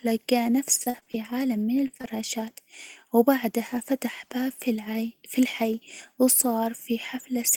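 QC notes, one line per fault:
0.83–1.16 s, repeated packet loss (robotic sound): choppy stutter as five gaps, the longest 33 ms, are patched by extending prior sound, filling about 38% of the stretch.
1.88–1.91 s, 1.97–2.01 s, 2.01–2.06 s, short concealed packet loss: brief smears just after "عالم من", where roughly 20 ms holes were bridged by continuing the preceding sound.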